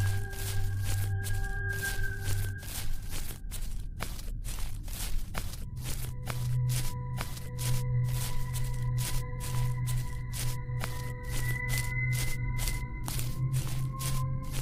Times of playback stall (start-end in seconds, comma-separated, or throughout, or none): none